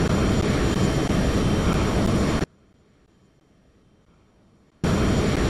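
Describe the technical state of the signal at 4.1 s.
At 4.1 s the signal is inside an audio dropout to a faint residue, running from 2.44 to 4.84 s. The wanted sound has likely been lost upstream while the downstream path stayed live, leaving only a faint leak about 35 dB down. The waveform collapses abruptly to a thin trace, and the spectrogram shows a near-empty band with sharp edges.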